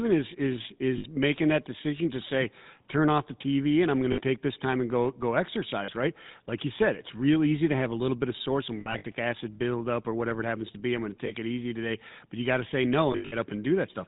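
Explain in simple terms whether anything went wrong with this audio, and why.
The whole recording has a buzzy, gravelly roughness and sounds muffled. That is the GSM full-rate codec, an early mobile-phone coder that rebuilds sound coarsely and cuts out the higher frequencies.

Brief metallic, ringing smears occur at 0.98, 4.12, 5.84, 11.26, from 8.80 to 9.05, and from 13.12 to 13.36 s. These are lost GSM frames: missing chunks were patched by repeating the last good sound.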